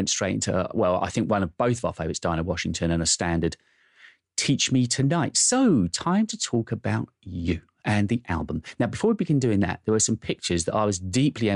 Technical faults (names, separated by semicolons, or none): none